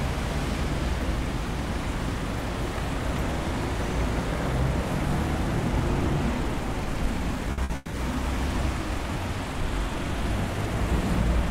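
Right around 7.5 seconds things get choppy. From 7.52 to 7.61 s and again from 7.64 to 7.73 s there's a burst of packet loss each time: about 60 ms of audio didn't arrive in time, so the receiver stretched the last bit of sound to cover the hole, fading it as it went. You hear a short smeared tail, then the sound picks up 60 ms further on with that slice gone. The two hits sit only 30 ms apart.

Straight after, from 7.76 to 7.97 s, comes a longer gap that sounds like a long network dropout, likely the connection stalling for longer than those bursts. The concealment carries the last sound for the full 180 ms as a fading buzz or hiss, never going fully silent, and then the audio jumps ahead with that 180 ms missing.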